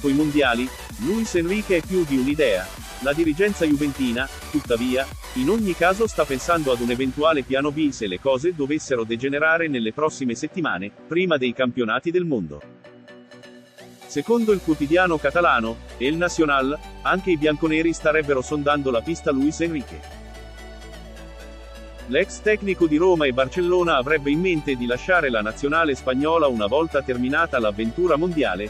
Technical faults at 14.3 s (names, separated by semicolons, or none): none